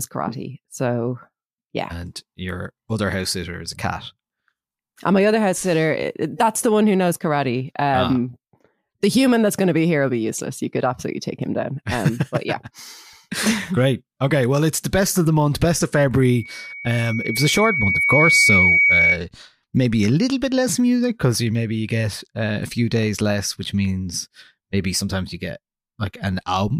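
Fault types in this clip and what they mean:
Loudspeaker feedback squeal: the mic is catching its own loudspeaker, and at 2.2 kHz the loop gain tops one, so that tone feeds itself. It swells over roughly two seconds from 16.22 s, ends up around 5 dB over the speech, and stops at 19.2 s.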